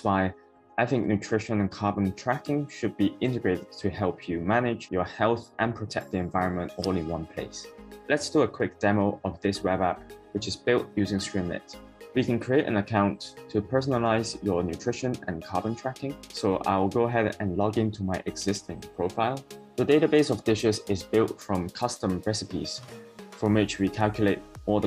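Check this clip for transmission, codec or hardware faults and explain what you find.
Nothing in this audio points to a fault anywhere along its path. There is nothing to report for any part of the clip.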